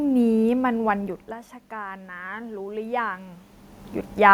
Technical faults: automatic gain rising

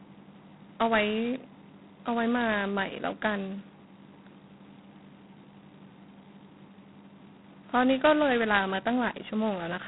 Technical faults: G.726 ADPCM

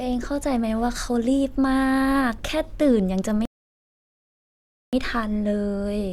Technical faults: rebuffering stall

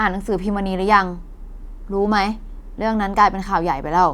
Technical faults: none

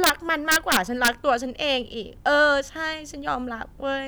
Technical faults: integer overflow

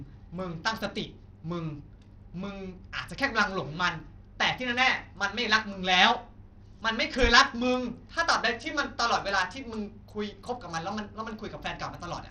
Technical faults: Bluetooth SBC compression

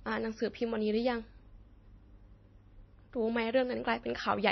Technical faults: transcoding between lossy codecs

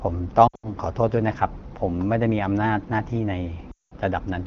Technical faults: lost AMR speech frames

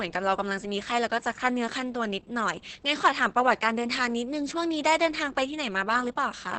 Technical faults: Opus voice compression

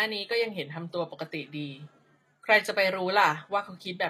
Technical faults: HE-AAC compression

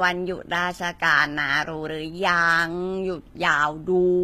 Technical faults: HE-AAC compression

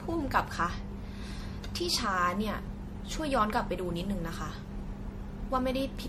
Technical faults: generation loss

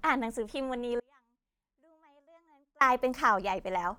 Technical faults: Bluetooth LC3 compression; audio dropout to a faint residue

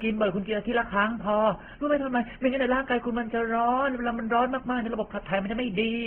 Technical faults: transcoding between lossy codecs

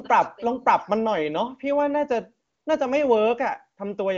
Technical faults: AMR comfort noise

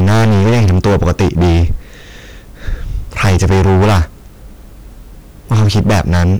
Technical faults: hard clipping

